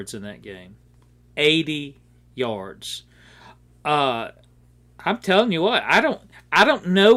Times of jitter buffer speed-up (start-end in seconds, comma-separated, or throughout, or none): none